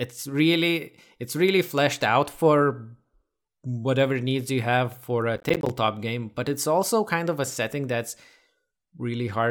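From 5.36 to 5.70 s the speech is torn by processor overload crackle: around ten buffers of roughly 10 ms each miss their deadline and become hard-edged silent gaps. Unlike a single dropout, this is a rapid gritty cluster that stops once the load passes.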